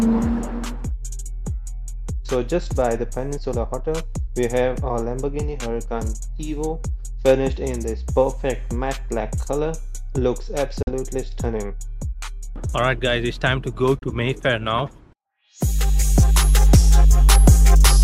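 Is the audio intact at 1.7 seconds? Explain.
Yes, the audio is intact at 1.7 seconds, with no dropout, click, distortion or other fault at that moment.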